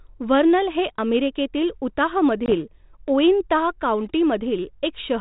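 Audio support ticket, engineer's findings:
Packet loss on the ADPCM call, 2.46 to 2.55 s: hard-edged 20 ms dropout, roughly two packets, filled with silence. The G.726 decoder's predictor and step size lose sync with the sender, so speech resumes slightly rough, recovering by 2.55 s on the 32 kbit/s link.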